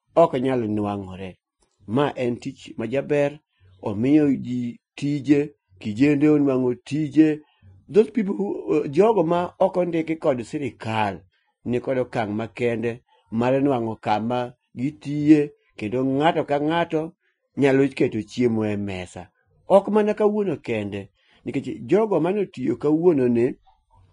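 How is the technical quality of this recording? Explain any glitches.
The recording has audible codec damage throughout. The speech sounds hissy and grainy, with nothing above 10.6 kHz and roughened, smeared consonants. This is likely Vorbis compression at a low bitrate, around 28 kbps, replacing fine treble detail with noise.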